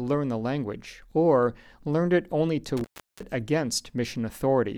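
At 2.77 s, just after "learned it only to", the speech drops out in an intermittent contact fault lasting until about 3.23 s. A loose plug or cable connection briefly opens, so the signal path breaks for roughly 360 ms and only a faint hiss remains. Crackles mark the edges of the break. On a waveform this appears as a flat, near-empty stretch with jagged spikes at each end; a spectrogram shows a blank band bordered by thin vertical broadband streaks.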